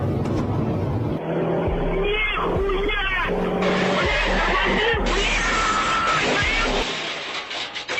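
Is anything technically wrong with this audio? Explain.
No, nothing technically wrong can be heard here.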